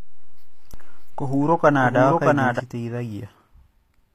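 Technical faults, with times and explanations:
Throughout, HE-AAC compression: the top end has a gritty, metallic sheen, with s sounds coming out lispy, and nothing at all above about 14.9 kHz. That points to a likely HE-AAC encode at a low rate, something like 24 kbps. The codec keeps only the lower spectrum properly and fakes the treble by copying lower bands upward, so the highs are not the original and their harmonics don't line up with the real ones.
0.74 to 2.60 s, doubled audio track: a second, full-band copy of the speech runs roughly 0.7 s behind the original at about the same level. It switches on and off abruptly at those two points, with no fade, decay or room colour. That dry, exact repeat points to the likely cause being the same audio mixed in twice, either through a slower second capture path or an edit that left two out-of-step copies overlapping.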